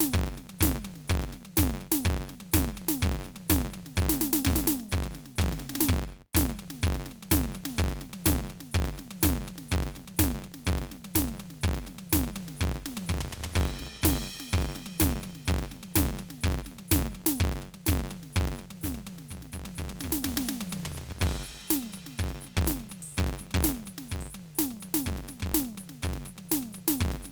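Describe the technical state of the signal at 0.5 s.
At 0.5 s, like everywhere else in the clip, the music carries a steady buzz at about 93.8 Hz that tracks its level. That's a filter restarted on every block: it drops its state and starts cold, ticking each time, which fits a 512-sample buffer.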